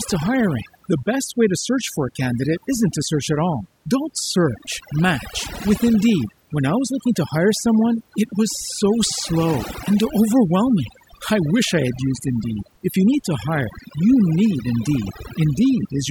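Right through this speech clip there's overdone noise removal: the reducer is clamping bands near its noise estimate, leaving near-silent gaps with twinkling specks.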